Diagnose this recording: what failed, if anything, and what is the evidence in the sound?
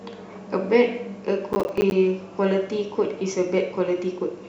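The failure sits at the driver or buffer stage: processor overload crackle. From 1.53 to 1.92 s, the speech breaks into a gritty burst of crackle. Many tiny dropouts come in quick succession. Each is a short silent gap with hard edges. The spacing suggests buffers of around 10 ms, with roughly ten of them missed. The processor could not fill each buffer before its deadline. Every miss left silence, and the sound cleared once the load eased.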